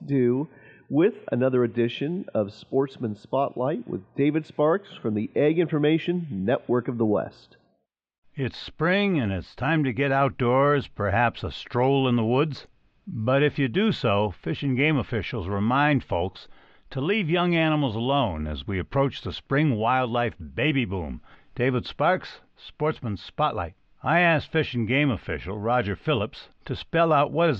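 Nothing stood out as a technical problem on listening to this speech recording.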